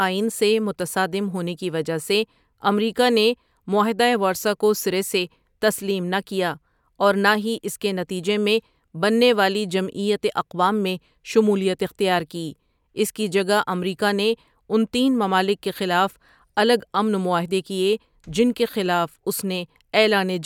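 No technical faults can be heard anywhere in the recording, so there is nothing to list in time order.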